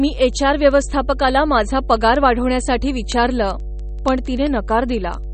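A steady 50 Hz mains hum runs under the speech for the whole clip, sitting roughly 10 dB below it. It comes from power-line coupling, such as a ground loop or a nearby transformer, and is heard as a constant low tone with some low harmonics.

Also present throughout is plainly audible codec damage: nothing remains above 8.4 kHz, and the speech has a watery, swirling quality with smeared attacks and metallic chirps on s sounds. This is likely MP3 compression, and the degree of damage points to a bitrate around 32 kbps.

From 0.14 s to 5.33 s, word clock ticks recur at roughly ten per second, around fifty in all, with uneven strength. A digital link is being read on an unlocked clock drifting by something on the order of 200 ppm, so each slip drops or repeats a single sample.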